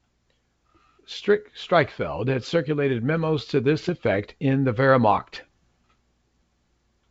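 From 3.83 to 3.92 s, just after "had circulated memos to" and before "in the", bit errors on an ADPCM link cause pops and a rough burst with brief level jumps, pointing to a handful of corrupted frames at roughly a fifth of a percent error rate. Flipped bits knock the decoder's step size and predictor off track, so the damage rings on briefly as noise, unlike the silent gaps of packet loss, over the clean 64 kbit/s G.722 wideband band.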